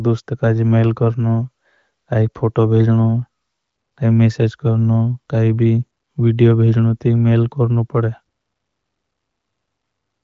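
No technical faults are audible.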